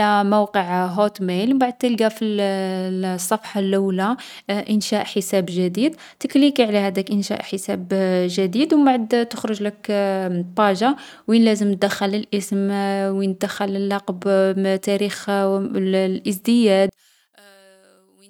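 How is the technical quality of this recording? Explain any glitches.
The recording has one clear glitch, at the very end. One channel inverted, 16.89 to 18.29 s: the speech falls about 31 dB to a faint trace, likely from reversed polarity cancelling the shared centre in mono.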